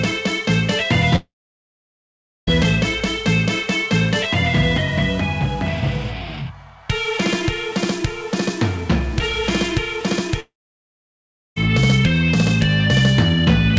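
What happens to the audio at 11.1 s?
At 11.1 s there is only silence. From 10.4 s the sound briefly continues as a fading buzz, then drops out for about 1.06 s before returning at 11.58 s, with roughly 1.16 s of material simply gone. This is most likely a long network dropout: packets stopped arriving, the receiver's concealment stretched the last sound until it decayed, and playback resumed later without the lost stretch. The returning audio still tops out at 8 kHz, consistent with a G.722 call path.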